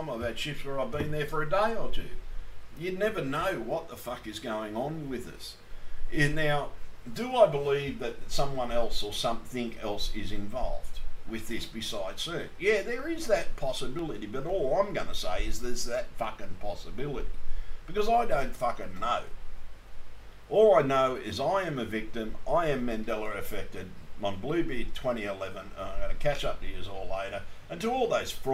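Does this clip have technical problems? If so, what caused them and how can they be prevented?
Yes, periodic USB or driver dropouts between 12.49 and 14.50 s: about every 0.5 s, roughly half a millisecond of audio is skipped, producing regular ticks. Prevent it by stopping background tasks that block the USB bus or audio driver and using a larger buffer.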